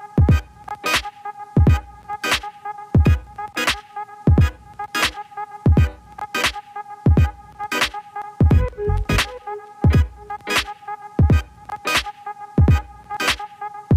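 Three abrupt skips break the sound at 3.27 s, 8.22 s and 13.17 s, each removing roughly a twentieth of a second with the two sides spliced straight together. This is audio missing between chunks, likely from a recorder or processor that drops a sliver each time it closes one 5-second block and opens the next. The metronomic spacing and the absence of any silent gap set it apart from random network dropouts, which leave irregular holes or muted stretches.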